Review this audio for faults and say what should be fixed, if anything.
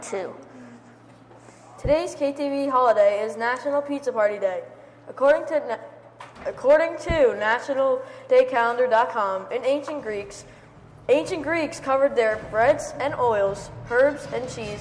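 There are no faults to report, so nothing in this audio needs to be fixed.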